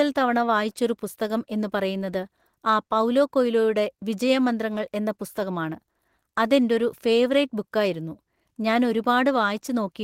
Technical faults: none

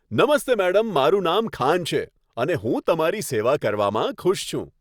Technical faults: none

